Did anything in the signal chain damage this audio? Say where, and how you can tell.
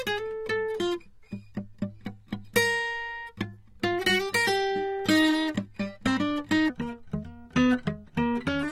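Yes. At the codec stage, the music carries AAC compression throughout, likely AAC-LC at a low rate that fits about 32 kbps. Nothing survives above 16.6 kHz, and coarse quantisation leaves the music dull and smeared, with an audible warbling, fizzy texture.

From 6.70 s to the end, a section at the wrong speed plays at 0.804 times its original rate, likely from playback or editing against the wrong clock. Pitch and tempo fall together, by about four semitones, so everything turns deeper and slower.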